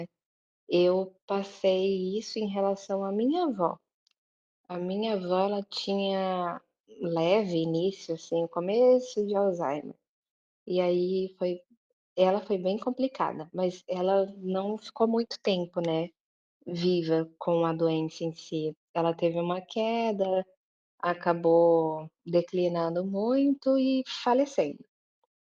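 Nothing goes wrong anywhere in this stretch of speech, so there's no fault to point to at any moment.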